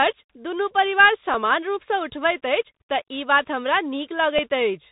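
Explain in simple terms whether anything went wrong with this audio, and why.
Two things went wrong. The whole recording went through a Bluetooth CVSD headset codec, the basic voice format headsets use for calls. It keeps nothing above about 4 kHz, so the speech sounds boxy and telephone-like, and its crude up-or-down coding lays a grainy hiss under the voice and makes s sounds scratchy. Unlike an ordinary low-quality recording that just sounds muffled, this one is narrow, rough and gritty at the same time.

Twice a Bluetooth headset packet was repeated: a tiny chunk of sound, under 4 ms, got lost between headset and phone, and the chip replayed the previous chunk in its place. This happens at 1.34 s, right after "दुनू परिवार", and at 4.38 s, just after "बात हमरा". Each time only one packet was lost, so you hear a brief tick rather than the steady buzz a longer run of repeats would cause, and rather than a gap of silence, as a dropout would leave.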